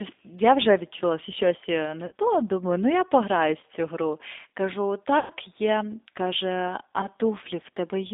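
Throughout the speech, the G.729 codec (the G.729A variant at 8 kbit/s) confines the sound to roughly 250 Hz to 3.7 kHz and leaves a plainly audible rough, synthetic edge. The coder rebuilds each 10 ms frame from a vocal tract filter, a pitch predictor and a handful of pulses, not from the waveform. That rebuilding is what sets it apart from a simple telephone band-limit: the voice itself sounds reconstructed, not merely muffled.

Four bursts of VoIP packet loss concealed by the speech codec occur at 2.06–2.12 s, 3.61–3.64 s, 5.19–5.32 s and 7.01–7.07 s. The missing stretches are about 50 ms, 20 ms, 110 ms and 20 ms, which fits runs of five, two, eleven and two lost frames. In each, the decoder extends the last pitch and filter with falling gain, so the sound smears into a buzzy tone or coloured noise that fades. The longest is near 5.2 s, and the voice stays weak or distorted just after it. 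This is what distinguishes concealment from a plain dropout: a dropout leaves silence or a click, while here the gap is filled with a decaying synthetic continuation.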